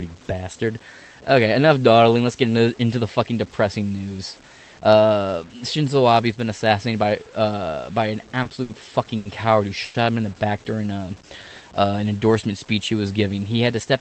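Throughout the speech there is a grainy, signal-following roughness, likely from low bit depth without dither: the samples seem truncated to roughly 7 bits, leaving noise around 30 dB below the speech. Quiet tails turn gritty and sputter. On a waveform, low-level passages show visible stair-steps. On a spectrogram, broadband grit tracks each syllable instead of forming a steady noise floor. The speech's top end stops near 8 kHz.

Four short stalls from a late packet follow. Each time the receiver ran dry and held the last sound until data arrived, so nothing is lost but a sound hangs too long. They come at 8.43 s, just after "by uh by an", lasting 20 ms; at 8.63 s, 60 ms; at 9.17 s, 80 ms, just before "coward who"; and at 9.85 s, 90 ms, between "coward who" and "him in the back". Each sounds like a brief hold with a slight buzz or dip. A spectrogram shows frozen, repeated harmonic bands, and the waveform shows a short repeating cycle.

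From 10.75 to 11.93 s a jitter buffer slow-down stretches the speech to about 87% speed at unchanged pitch, adding 159 ms. The buffer was refilling by repeating single pitch periods or bits of pauses. Syllables drag. A spectrogram shows stretched formants with steady harmonic spacing, and the waveform shows runs of near-identical cycles.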